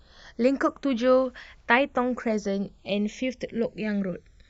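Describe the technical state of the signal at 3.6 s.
At 3.6 s the speech shows channels drifting apart, present throughout the clip. The two sides run on clocks differing by roughly 200 parts per million. By the end, one channel lags by about half a millisecond. In mono, comb notches sweep slowly, giving a slow flanging.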